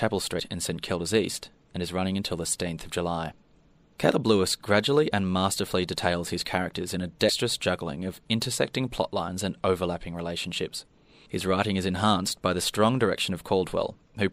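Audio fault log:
0.38, 2.52 and 7.28 s (the last between "his characters in a" and "juggling of intersecting plotlines"), compressed frames skipped: brief smeared blips as about 70, 150 and 70 ms of sound vanish. The jumps fit whole 26.1 ms frames going unplayed, and overlapping neighbour frames blur each join.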